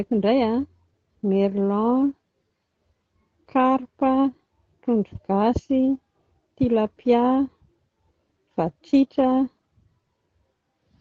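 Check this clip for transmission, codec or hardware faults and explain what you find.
No faults turn up in this clip.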